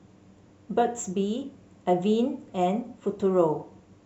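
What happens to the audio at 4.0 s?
At 4.0 s you're still hearing the sample clock jitter that runs through the whole speech clip. The converter's timing wobbles by around a microsecond, so steep, loud parts pick up a faint hiss or roughness, roughly 45 dB down, that drops away in quiet gaps.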